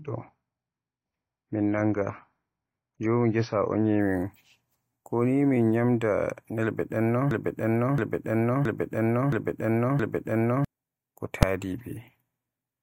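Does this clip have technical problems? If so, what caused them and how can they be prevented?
Yes. The clip is speech and has three faults.

From 0.0 to 4.0 s, the adaptive stream is starting at a low bitrate. Nothing sounds above 6.6 kHz, and codec artefacts are stronger. That fits a low-rate AAC rendition, near 24 kbit/s. At 4.0 s quality jumps without a gap, as the player steps up to about 96 kbit/s. Starting on a higher rung, or measuring bandwidth first, prevents it.

From 7.31 to 10.65 s there is a broken-record loop. A 0.67 s fragment plays five times, back to back. The speech that belonged there is gone. The likely cause is a stalled player, encoder or stream that kept resending its last fragment. A watchdog that detects stalls and mutes or resyncs prevents it.

At 11.43 s there is a single loud bang. This is invalid numbers at full scale. A calculation produced infinite or invalid values, and they were forced to the maximum level. 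The block lasts 2.67 ms, which fits a 128-sample block. Checking for invalid values and clamping them before output prevents it.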